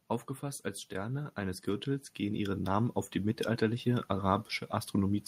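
From 0.4 s to about 3.95 s the automatic gain is rising: the control decided the input was too quiet and kept pushing its gain up, about 9 dB in total. The speech and the background noise swell together, steadily and slowly, with no jump.

Partway through that swell, around 2.23 to 2.29 s, there's a lost packet rebuilt from error correction. The decoder filled the hole with the low-bitrate backup copies carried in the following packets, so nothing drops out. That stretch just sounds briefly rougher and noisier, and the roughly 40 ms of rebuilt audio fits two 20 ms frames.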